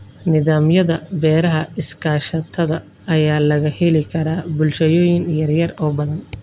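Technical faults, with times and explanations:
No technical faults can be heard in this speech recording, and the signal stays steady and intact throughout.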